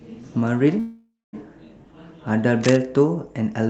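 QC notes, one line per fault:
0.79–1.35 s, call audio freeze: the sound stops and is replaced by a fading buzzy continuation of the last moment, settling into about 0.22 s of near silence before the speech resumes exactly where it left off, with nothing lost but the rest of the clip pushed about 0.54 s later. This is likely a jitter buffer running dry while packets were held up. On a spectrogram, smeared, decaying bands give way to a blank patch, all below the 8 kHz ceiling of the call codec.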